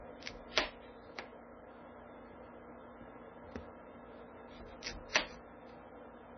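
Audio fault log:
throughout, MP3 compression: watery, swirly sound cut off above 6.1 kHz with smeared attacks, likely from heavy MP3 encoding at a bitrate near 16 kbps.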